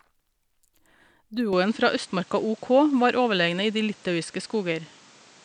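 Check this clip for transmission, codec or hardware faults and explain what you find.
One fault stands out: from 1.53 s to the end, the speech changes character at once, with no silence at the changeover. The likely cause is an input switched to a poorer device, another microphone or a headset profile whose narrower pickup passes nothing above 9.2 kHz. The speech sounds duller, its level shifts by about 5 dB, and a new noise floor appears some 30 dB below it. On a spectrogram the upper band cuts off abruptly at 1.53 s, and the waveform's envelope steps there.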